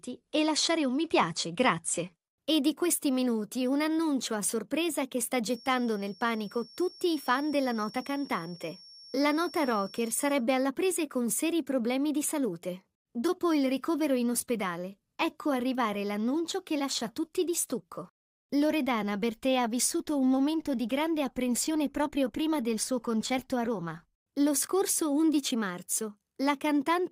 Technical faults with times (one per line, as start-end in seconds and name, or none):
5.42-10.46 feedback whistle